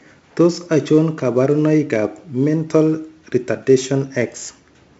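Speech stored as 4-bit ADPCM, with each sample coded as a coarse 4-bit step from a predicted value, leaves heavy codec damage throughout. The quantisation error rides on the signal as a gritty hiss that swells on every loud syllable and roughens sharp consonant attacks where the adaptive step lags. Nothing survives above about 7.7 kHz, dulling the top end, which points to a 16 kHz sample rate and roughly 64 kbps.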